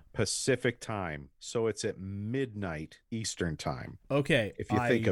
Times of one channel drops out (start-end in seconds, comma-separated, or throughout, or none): 0.84-3.24